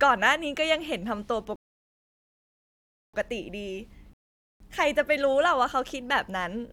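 Two rebuffering stalls interrupt the speech. At 1.56 s it drops to silence until 3.14 s, adding about 1.6 s. At 4.13 s it stops again until 4.60 s, adding 0.47 s. Each time, the player ran dry of downloaded audio. Playback resumes exactly where it stopped.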